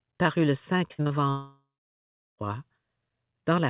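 Just after "paru le", from 0.88 to 1.12 s, the sound turns choppy, with brief stutters where pieces drop out. This is repeated packet loss (robotic sound): several short holes, the longest about 46 ms, each patched by extending the previous sound, so about half the stretch is filler.

From 1.30 to 2.40 s, the sound smears into a fading buzz and then gives way to about 0.69 s of near silence before it resumes with that part missing. A long network dropout is the likely cause, with the receiver stretching the last audio until it gave out.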